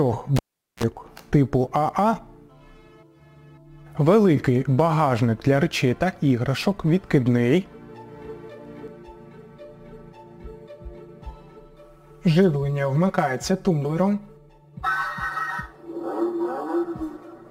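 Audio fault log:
0.36 to 0.83 s, cable pulled and plugged in: a sharp pop marks the moment the live lead is withdrawn, after which the signal drops to near silence for about 420 ms. As the plug goes back in, a brief burst of 60 Hz mains buzz lasting roughly 38 ms appears while only the tip makes contact, picking up hum before the ground connects. A second pop follows as the full connection seats and the sound returns.
8.88 to 17.50 s, channel delay (comb filtering): from this point to the end, one channel arrives late by around 5 ms relative to the other, and the two are summed to mono. The shared content cancels at evenly spaced frequencies, with the first notch near 100 Hz and further notches repeating up the spectrum. The result is a hollow, phasey colouration with fixed gaps in the frequency response.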